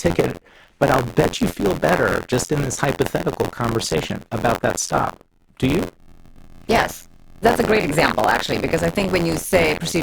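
Buffer tearing runs through the whole clip. The writer and reader of the ring buffer have drifted so they cross inside every period, leaving roughly a sixth of each block filled with audio from about 50 ms earlier, with hard joins on either side. The result is a robotic rattle at about 86 Hz, which fits a 512-sample buffer. It rides on the speech and drops away in pauses.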